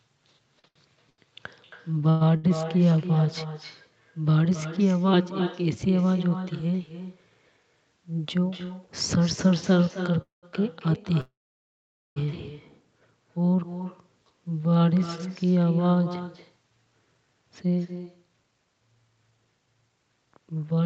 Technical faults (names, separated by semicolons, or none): echo with no canceller; repeated stalls (stutter); jitter buffer speed-up; call audio freeze